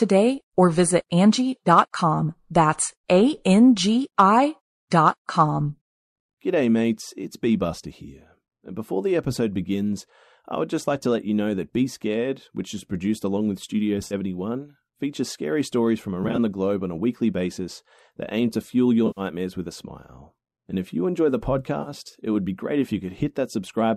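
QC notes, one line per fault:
14.07 to 21.89 s, AAC frame loss with concealment: four brief smeared, phasey patches at 14.07 to 14.14 s (40 ms), 16.24 to 16.39 s between "features scary stories from" and "the globe on a" (70 ms in short gaps of about 20 ms), 19.07 to 19.21 s after "aim to fuel your" (100 ms), and 21.82 to 21.89 s after "if you enjoy the" (40 ms). The decoder rebuilt missing audio from the last good spectrum, probably the short-frame low-delay AAC stream.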